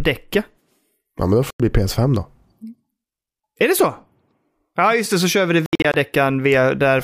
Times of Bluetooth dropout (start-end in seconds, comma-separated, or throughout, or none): 1.50-1.60, 5.66-5.94